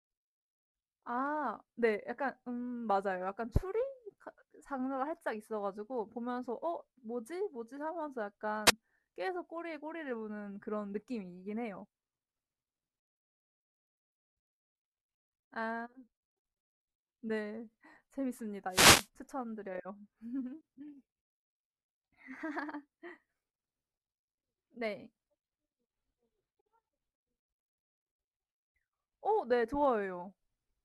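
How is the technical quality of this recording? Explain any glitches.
The recording has two wireless microphone noise hits in the speech. The first is a brief swish from 8.66 to 8.71 s, and the second, longer burst of static runs from 18.69 to 19.08 s. Both come from the analogue FM radio link fading as reflected signals cancel at the receiver. Receiver hiss rises, and in a deep fade it breaks into clicks and covers the voice. Unlike a digital dropout, the sound here fills with noise rather than falling silent.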